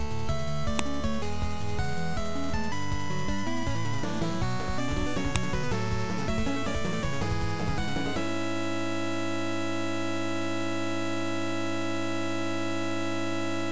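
Separate WAV pieces were joined without their headers stripped, so each header's few dozen bytes played back as samples. This file header played as audio shows up as a sharp, loud click at 0.79 s and again at 5.36 s, marking where each new piece begins.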